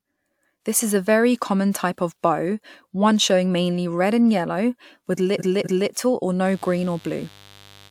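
At 5.38 s there's repeated frames: a 256 ms chunk gets played twice more, so the speech stutters until 5.89 s and runs half a second long. From 6.40 s to the end, mains buzz creeps in, a raspy 50 Hz buzz from switching spikes, sitting well below the speech, roughly 30 dB down.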